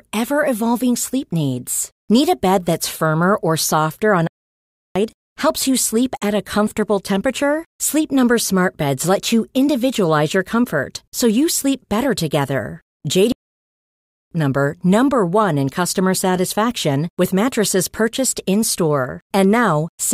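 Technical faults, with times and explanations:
4.27 to 4.96 s, playback stall: the speech cuts off right after "firmer or softer on" and the output is silent for about 0.68 s. The sound then resumes. A gap like this in mid-flow is likely the player running short of data or having its output thread held up. Nothing reaches the speakers until it recovers. 13.32 to 14.31 s, playback stall: after "you sleep better together" the audio drops to silence for about 0.99 s, then carries on.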